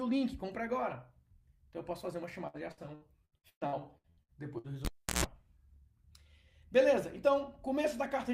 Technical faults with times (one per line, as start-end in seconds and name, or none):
2.47-4.67 repeated packet loss (robotic sound)
4.85-5.24 cable pulled and plugged in